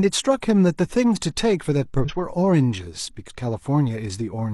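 Compressed frames skipped: whole frames never reached playback at 2.0 to 2.12 s and 3.25 to 3.31 s, so the speech jumps ahead roughly 150 ms, then about 100 ms.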